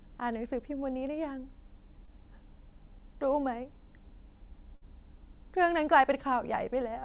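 Speech carried over a call path, with a hard ceiling at 4 kHz that fits narrowband G.711 A-law at 64 kbps, and two packet-loss faults. At 2.06 to 2.09 s a short concealed packet loss leaves a brief smear: about 20 ms is missing, filled by a 13 ms extrapolation that shows as a blurred, repeated slice in the spectrogram. At 4.75 to 4.83 s a burst of packet loss holds the last sound and fades it, visible as a decaying, smoothed waveform. About 60 ms of real audio is skipped before the sound resumes.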